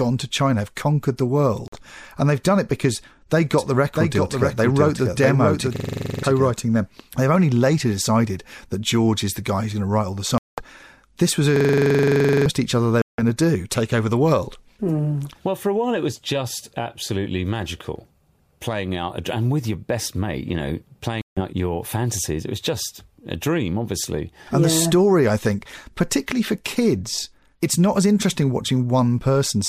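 A speech recording with three kinds of fault. The first is a Bluetooth dropout, heard as four silences at 1.68 s (about 46 ms), 10.38 s (about 198 ms, between "to write all the" and "this was"), 13.02 s (about 168 ms) and 21.21 s (about 152 ms). The likely cause is wireless packets arriving too late and being discarded, with the longest gap fitting around a dozen lost frames. On a waveform each is a flat silent hole, and on a spectrogram a blank vertical band across all frequencies, after which the speech resumes further along, as if it had kept playing. The second fault is a doubled audio track from 3.58 s to 6.50 s, starting right after "done it because they". A full-band copy of the speech runs roughly 0.7 s behind and about 5 dB quieter, with no reverberant tail, and likely comes from a second, slower capture path mixed in. A spectrogram shows the harmonic patterns repeated at that fixed offset, and the copy starts and stops abruptly. 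The third is a system hang loop at 5.76–6.23 s and 11.56–12.46 s, the second beginning after "this was" and releasing into "each other they". A 42.67 ms slice repeats exactly, 11 and then 21 times, which fits a 2048-sample buffer and produces a rapid machine-gun stutter at 23.4 Hz, replacing roughly half a second and then a full second of speech. The waveform shows an identical repeating block, and the spectrogram shows evenly spaced vertical stripes.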